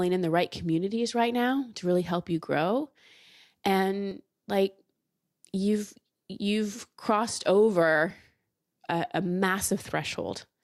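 Speech, with two brief skips. They fall at about 4.11 s and 8.10 s, roughly 4 s apart. Each is an overlap between stream segments. The audio arrives in segments of about 4 s, and the time stamps of neighbouring segments overlap slightly. The player trims the overlap, but that sound was not actually duplicated. About 10 ms of real audio is lost at each join. The waveform jumps there, which is heard as a click or tiny skip.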